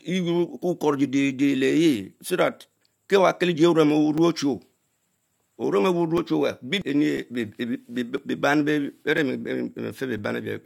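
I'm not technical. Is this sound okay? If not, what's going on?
No. From about 4.18 s to 10.19 s, something in the computer briefly stalls the USB connection or the audio driver once every second. These are periodic USB or driver dropouts. Each stall leaves a gap of silence a few milliseconds long, so the speech has about seven evenly spaced ticks.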